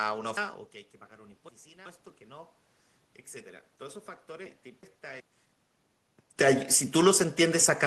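Speech jumbles twice, from 0.37 to 1.86 s and from 4.46 to 5.20 s. The cause is chunks out of order: a 0.37 s block plays late, three chunks late in the first case and one in the second, creating abrupt joins.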